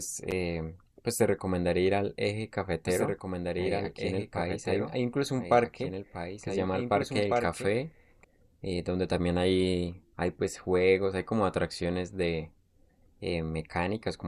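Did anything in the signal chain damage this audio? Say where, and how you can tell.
Yes. A doubled audio track runs from 2.86 s to 8.24 s. A second copy of the speech sits about two seconds behind the first, roughly 5 dB quieter. It is full-band, with no decay or room colour, so it is not an echo. It starts and stops abruptly at those times. The likely cause is a second, slower capture path at the driver or buffer stage feeding the same audio into the mix.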